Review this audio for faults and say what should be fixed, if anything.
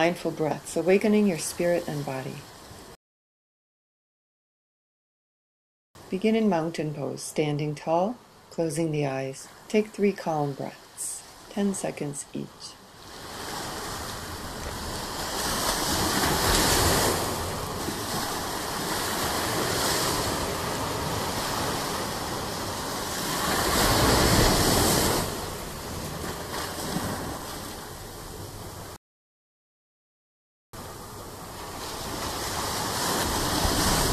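Two rebuffering stalls: the player ran dry and went silent from 2.95 to 5.95 s and from 28.96 to 30.73 s, then resumed exactly where it stopped, adding 3.0 s and 1.77 s. A larger playback buffer or adaptive bitrate would prevent this.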